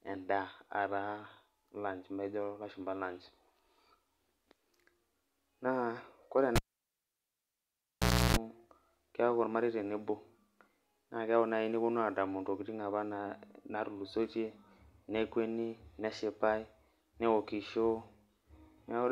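A speech recording in which, at 6.56 s, a pop drops the sound to near silence for about 1.76 s, including roughly 0.32 s of 60 Hz mains buzz, and a second pop at 8.37 s: a cable pulled and plugged in while live, buzzing as only the tip made contact.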